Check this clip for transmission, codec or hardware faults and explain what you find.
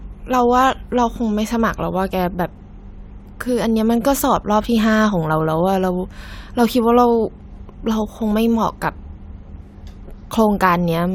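Nothing in the speech points to a transmission or hardware fault.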